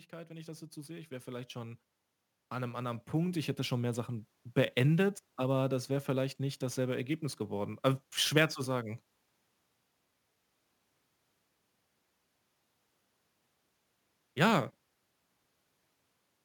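The converter's sample clock wanders by a few microseconds throughout this speech recording, so each sample lands slightly early or late. This sample clock jitter adds a grainy hiss some 25 dB below the speech that thickens on loud, bright sounds and disappears in pauses. Separately, an automatic gain control twice judged the input too quiet and turned itself up. Speech and background swell together by about 7 dB from 0.1 to 1.86 s, then by about 6 dB from 2.48 to 4.37 s.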